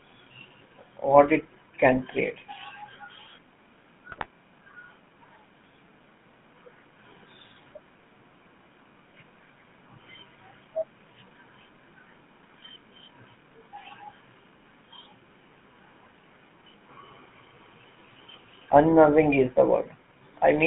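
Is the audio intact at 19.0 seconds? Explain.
No, at 19.0 s the speech is still going through the GSM full-rate codec, which affects the whole clip. The vocal tract is modelled and driven by a thinned, pulse-like excitation, which fits GSM's 13 kbps. It gives a clearly buzzy, gravelly roughness inside a narrow band of about 150 Hz to 3.5 kHz.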